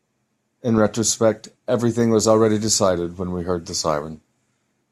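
No technical faults are audible.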